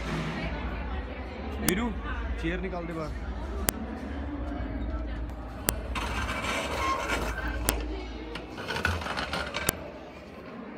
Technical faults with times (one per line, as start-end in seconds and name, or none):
1.69 file header played as audio
3.69 file header played as audio
5.69 file header played as audio
7.69 file header played as audio
9.69 file header played as audio